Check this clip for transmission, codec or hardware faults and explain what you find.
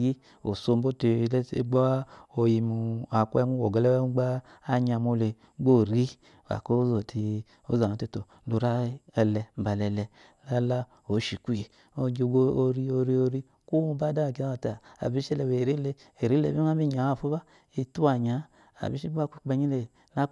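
Nothing in this speech recording stands out as a fault, so there's nothing here to flag.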